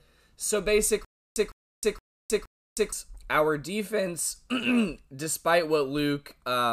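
A speech recording with a stutter with silent gaps running from 1.05 to 2.92 s: one short burst of about 156 ms plays four times, each followed by roughly 314 ms of dead digital silence, so it pulses evenly every 469 ms or so. Normal playback picks up again at "our defense". The likely cause is a stalled player or stream replaying its last fragment on each retry, and whatever should have played in that stretch is simply gone.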